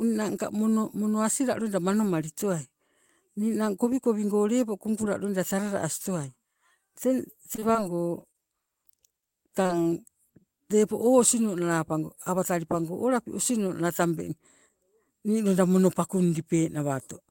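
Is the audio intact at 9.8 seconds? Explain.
No, not quite. Just before that moment, from 9.67 to 9.71 s, there is a short concealed packet loss. About 20 ms of the call never reached the decoder in time, so the receiver carried the preceding sound forward for 22 ms, extending its pitch if voiced or its noise shape if not, then crossfaded back into the real signal. What you hear is a brief smear or wobble, and a quick consonant in that gap may be gone.

Then, from 9.83 to 9.87 s, comes a short stall from a late packet. A packet arrived after it was due, the jitter buffer ran dry, and the receiver held the last sound for 24 ms until the data showed up, resuming exactly where it had left off. Nothing is lost, but the sound lingers a touch too long with a faint buzz or dip, and everything after it runs 24 ms later than before.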